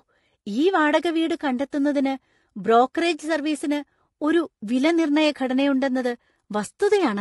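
It's a speech clip with plainly audible codec damage all the way through: the voice sounds rough and grainy, with noise between the harmonics and a thin top end. That's likely low-delay AAC compression, AAC-ELD, whose short frames smear pitch detail at a bitrate around 32 kbps.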